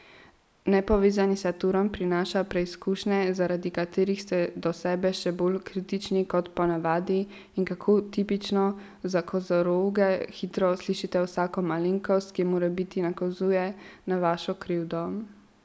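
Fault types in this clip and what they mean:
No faults heard.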